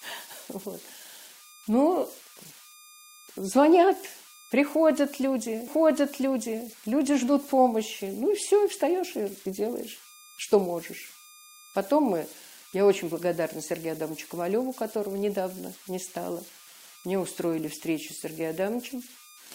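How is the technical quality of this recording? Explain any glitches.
The recording has two faults: a tonal artefact running throughout, and a one-second replay early on.

Converter idle tones, present for the whole clip: an undithered delta-sigma converter, fed very low-level input, settles into repeating bit patterns that produce a whistle around 1 kHz, roughly 23 dB below the speech, audible in pauses and as grain under quiet syllables.

Stream segment repeated, from 5.67 to 6.67 s: the player queued the same chunk twice, so one second of speech plays again, adding 1 s to the timeline. A small blip marks the jump back, just before "люди ждут помощи".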